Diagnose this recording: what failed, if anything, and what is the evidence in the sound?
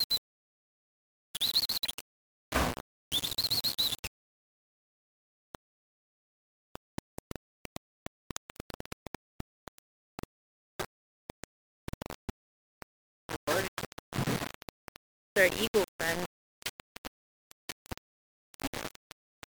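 The whole clip has a grainy, gritty distortion that tracks the sound, with the error nearly as loud as the signal. That's low bit depth without dither. It's likely a sample-format conversion that rounded down to just 4 bits, so the quantization error follows the waveform.

There are short broken spots at 1.84–1.87 s, 13.67 s and 18.66–18.69 s, where the audio jumps ahead with a brief chirp or hole. That's a broken MP3 bit reservoir in the codec stage. A cut likely left the following 24 ms frames reading borrowed bytes from the wrong frame.

From 6.75 to 10.24 s there's a train of clicks, about twenty similar pops at roughly 6.3 per second, unevenly spaced and standing well above the sound. The likely cause is interference in the analogue wiring or a faulty connection or power supply injecting repeated pulses.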